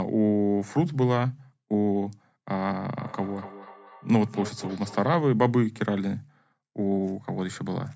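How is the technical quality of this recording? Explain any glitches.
The recording has one clear fault. From 2.99 to 5.17 s there is feedback echo between two devices: a second device in the room replays this microphone's sound, which the microphone picks up again about every fifth of a second, beyond the reach of either echo canceller. The repeats peak about 16 dB below the speech and sound thin and ringing. On a waveform they appear as small evenly spaced copies trailing each burst, and on a spectrogram as faint repeated smears.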